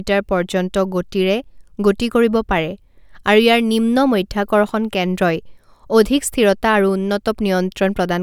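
No technical faults can be heard anywhere in the speech, with the signal remaining continuous and steady throughout.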